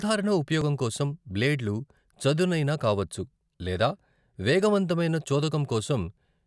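No technical faults are audible anywhere in the speech recording.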